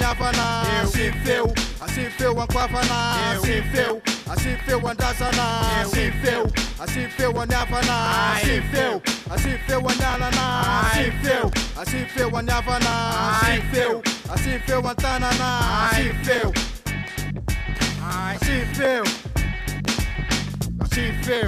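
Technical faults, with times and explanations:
17.76–18.72 s, GSM phone buzz: a 2G handset's radio bursts, repeating about 217 times a second, are rectified by the audio circuitry, producing a steady, raspy 217 Hz buzz rich in harmonics, about 21 dB below the sound and unrelated to it.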